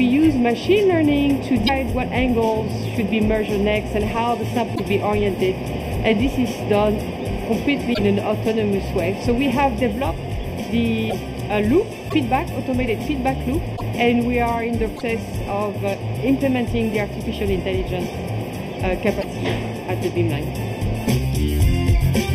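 Throughout, channel delay (comb filtering): one channel lags by about 0.4 ms, so the mono sum carves evenly spaced notches from around 1.5 kHz, sounding hollow.

Brief chirps or holes of 30 to 60 ms, with the sound jumping ahead, occur at 1.66, 4.74, 7.93, 11.09, 12.08, 13.76, 14.96 and 19.19 s. The likely cause is a broken MP3 bit reservoir after dropped frames.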